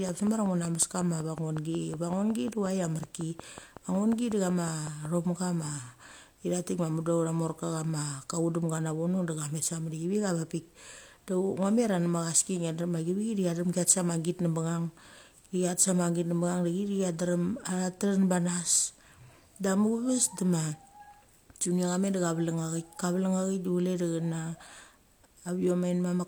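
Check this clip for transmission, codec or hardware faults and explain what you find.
One fault stands out, near the start of the speech. A train of clicks runs from 0.09 s to 5.06 s. About thirty clicks arrive at a steady 5.44 per second. Each is a short pulse of much the same shape. They peak roughly 10 dB above the speech, so they cut through clearly. The cause is likely interference from nearby equipment or a faulty connection or power supply injecting repeated pulses. The result is an even ticking laid over the speech and heard in its pauses too.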